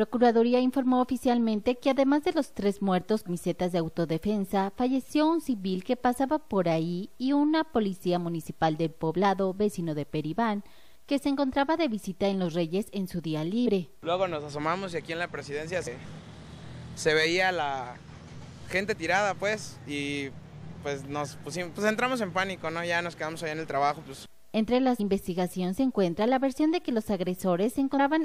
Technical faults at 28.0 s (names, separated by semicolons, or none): damaged data in a compressed stream